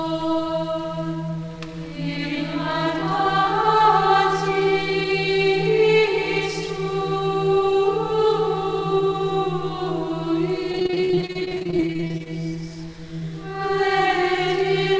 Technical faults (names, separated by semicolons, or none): repeated packet loss (robotic sound)